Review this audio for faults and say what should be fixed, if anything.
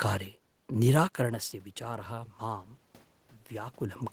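Automatic gain rising runs from 1.17 to 2.75 s. Just before it, around 1 s, the talker moves back and the level reaching the microphone falls by about 14 dB. The gain control reads this as a quiet input and slowly lifts its gain by about 4 dB over roughly a second and a half. The room noise swells along with the voice, so the background breathes up. Fixing the gain, or slowing and capping its rise, would prevent this.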